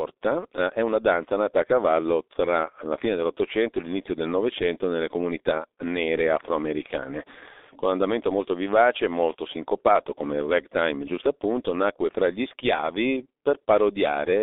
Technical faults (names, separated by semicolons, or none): G.723.1 codec